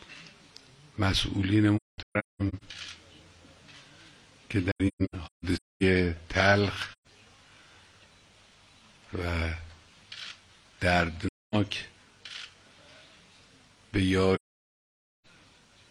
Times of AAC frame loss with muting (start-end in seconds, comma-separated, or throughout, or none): 1.76-2.63, 4.71-5.83, 6.92-7.07, 11.27-11.55, 14.35-15.26